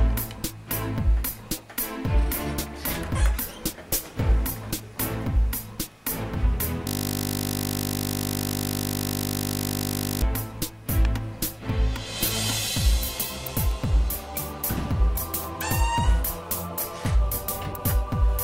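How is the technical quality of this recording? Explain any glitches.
There's one real glitch, a system hang loop from 6.87 to 10.22 s. The machine or its driver froze while the sound hardware kept replaying the same 20 ms slice of its buffer, about 167 times over, so you hear a flat, steady buzz at 50 Hz instead of the audio.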